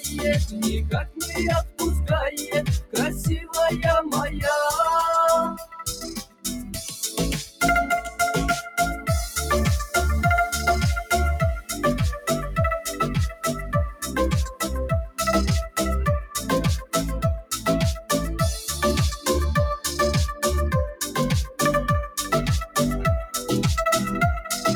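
From start to finish the level pumps and flutters, with sustained parts and decaying tails sinking by around 10 dB while sharp attacks push through. The cause is a noise suppressor applied to music or sounds: a speech-tuned suppressor misreads steady tones and ambience as noise.

Deeper dips come from sound cut by the noise suppressor. They fall at 0.0–1.81 s (about 18 dB), 2.36–3.55 s (about 17 dB), 5.52–9.08 s (about 19 dB), 11.61–12.28 s (about 15 dB), 12.86–18.1 s (about 18 dB) and 20.34–22.76 s (about 15 dB). In each, held or fading material is pulled down hard for a few hundred milliseconds up to around a second and a half in total, because the suppressor takes that material for noise.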